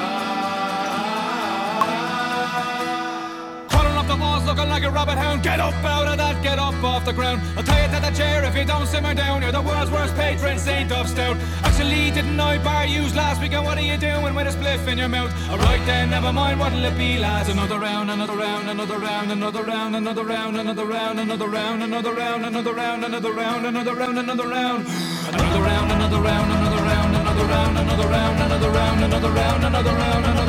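The audio jumps forward three times, each a case of compressed frames skipped. The jumps fall at 1.81 to 1.83 s, 18.25 to 18.29 s and 24.04 to 24.08 s. The first and last drop about a tenth of a second of material. The middle one drops about half that. Whole coded frames never reach the output, being missing or rejected as damaged.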